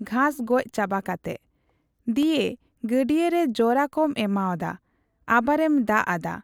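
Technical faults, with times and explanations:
2.23 s, block of digital silence: the speech drops straight to zero for about 0.73 ms and comes back with no fade, which fits a 32-sample block of the output buffer going unfilled. The gap is far too brief to register as a hole. What is heard is a tick or dip, because the waveform jumps abruptly to zero and back at the two edges.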